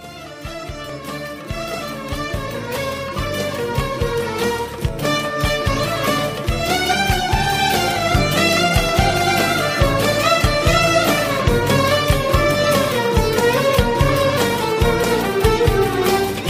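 Overlap between stream segments at 0.89–0.91 s, 4.88 s and 8.89 s trims real audio at 4 s segment joins. Each jump is heard as a tiny skip.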